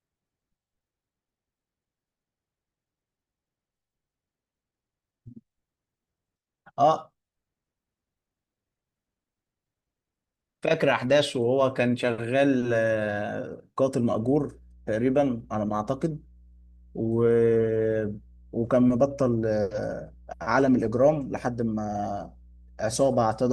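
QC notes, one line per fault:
14.19 to 23.52 s, mains hum: a steady 60 Hz tone enters partway through the speech and holds to the end, sitting roughly 25 dB below it, as a ground loop or nearby transformer couples the power-line frequency into the signal path.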